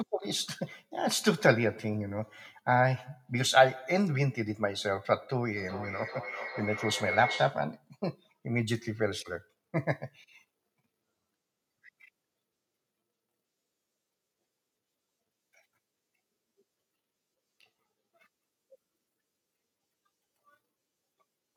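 A speech recording carries a feedback howl from 5.57 to 7.7 s, where a microphone and loudspeaker share one acoustic loop that adds level on each pass. The repeats swell rather than decay and narrow to a tone around 2 kHz, repeating roughly every 0.4 s and peaking at about 8 dB below the speech. A spectrogram shows a bright horizontal line near 2 kHz brightening over those two seconds, and the waveform shows a growing envelope.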